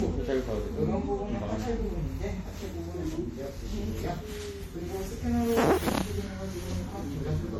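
Throughout, the sound is swirly, hollow and smeared, with attacks blurred. This is generation loss, likely from repeated MP3 encoding, around five passes at what fits 64 kbit/s. Each pass re-quantises on a shifted frame grid, stacking fresh noise and spectral holes.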